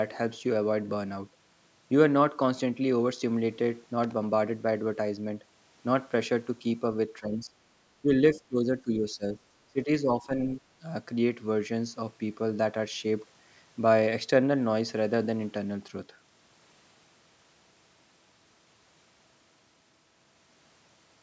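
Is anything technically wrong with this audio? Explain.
Yes, there are two kinds of fault in this speech.

From 4.04 to 4.13 s there is a short, ragged burst of crackle and scratching laid over the audio. This is loose connector crackle. A worn or dirty contact somewhere in the chain was briefly making and breaking, chopping the signal on and off many times within that tenth of a second.

In three stretches, 7.19 to 7.53 s, 8.02 to 9.25 s and 9.67 to 10.51 s, the speech sinks in level, thins out or drops away in pieces. The deepest dips are about 15 dB in the first two and about 20 dB in the third, and the losses add up to roughly 0.3 s, a second and half a second. This is likely speech suppressed in double talk: the echo canceller could not tell the talker apart from loudspeaker echo while the far side was talking, so it turned the microphone signal down.

The band ends at 8 kHz, as expected from call microphone processing.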